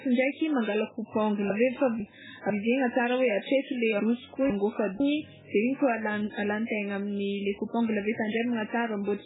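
Throughout, the speech sounds watery and swirly, with smeared onsets and nothing above 3.8 kHz. This is likely heavy MP3 compression at a very low bitrate, around 8 kbps. Weak frequency lines drop in and out between frames, and the treble is cut off.

Between 1.5 and 2.5 s, and again between 4.0 and 5.0 s, the speech jumbles briefly. In each span, chunks out of order swap two 500 ms pieces so the earlier one plays second, leaving three abrupt joins.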